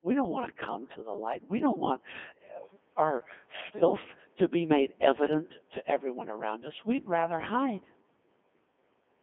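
From start to finish the speech carries Codec 2 vocoder damage, with heavy buzzy, robotic synthesis consistent with the 2.4 kbit/s mode. The decoder rebuilds the voice from sine harmonics, so the spectrogram shows evenly spaced, smeared harmonic stripes confined to about 200 Hz to 3.5 kHz.

At 0.80 to 0.96 s, just after "don't want to", bit errors on digital voice radio corrupt the vocoder parameters for a handful of frames, at roughly a few percent of bits. Pitch, level and tone colour lurch into a warbling bleep, seen as abruptly jumping harmonics and blocky level steps.

A second, harsher burst at 3.68 to 3.82 s, right before "to be made evident", comes from an error rate of roughly 7 percent. It breaks into robotic gibberish, with frame-length discontinuities in the waveform and harmonic lines that jump between frequencies on the spectrogram.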